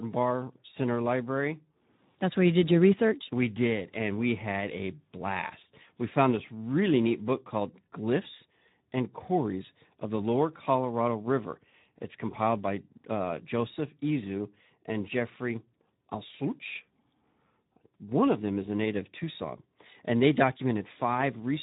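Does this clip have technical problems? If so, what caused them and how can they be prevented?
Yes. Speex codec damage is plainly audible throughout the speech. It sounds hoarse and noisy because the CELP coder has too few bits to model the excitation, which fits a bitrate near 11 kbps. Unlike packet-loss glitches, the roughness is steady rather than intermittent. To prevent it, encode at a higher Speex quality setting or use a modern codec such as Opus.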